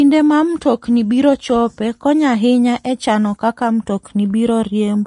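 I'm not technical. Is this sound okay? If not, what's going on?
No. The speech has plainly audible damage from start to finish, most likely from Vorbis compression squeezing the file too hard. The crisp top end is cut away. What remains in the upper range has been stored so roughly that fine detail turns into a grainy hiss, which gives the voice a rough, smeared quality.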